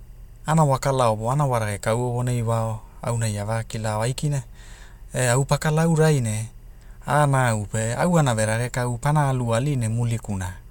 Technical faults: timecode bleed

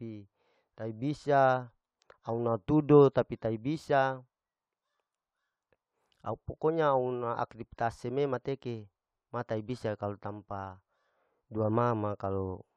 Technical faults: none

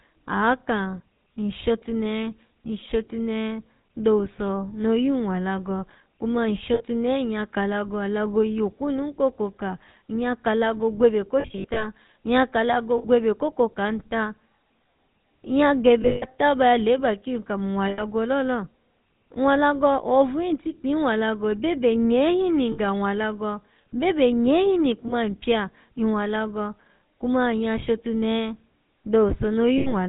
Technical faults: GSM full-rate codec; lost GSM frames

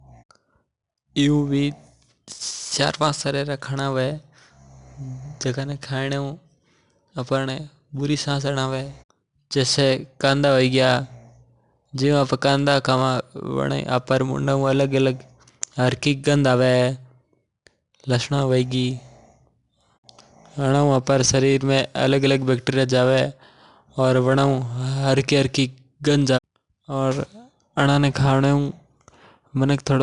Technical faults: 4-bit ADPCM compression

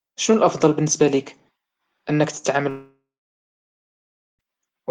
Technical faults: long network dropout

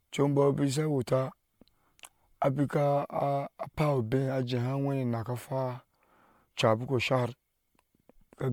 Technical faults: generation loss

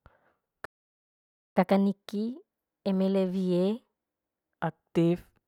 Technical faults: playback stall; catch-up at higher speed

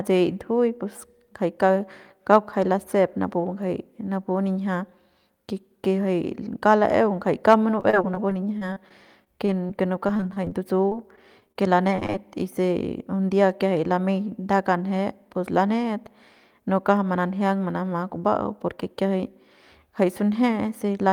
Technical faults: repeated packet loss (robotic sound)

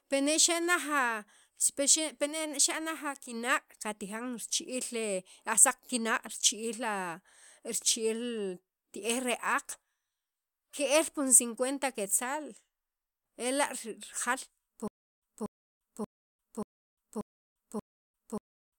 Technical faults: stutter with silent gaps

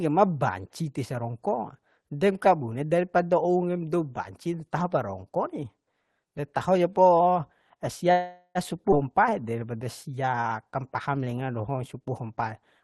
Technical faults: call audio freeze; skip ahead; jitter buffer slow-down

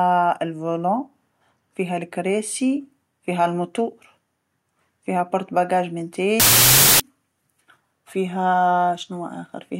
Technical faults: wrong sample width

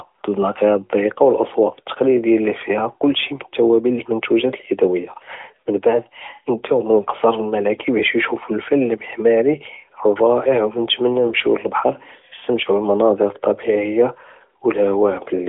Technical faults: AMR bit errors

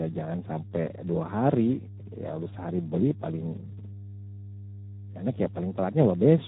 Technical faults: mains hum; Speex codec

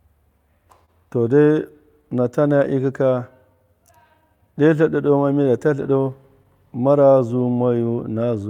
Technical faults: clock drift between sender and receiver; short stall from a late packet; repeated timing corrections

